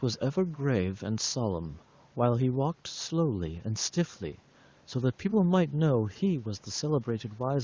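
No technical faults can be heard in this speech, which carries the usual limited call bandwidth of an HD Voice connection.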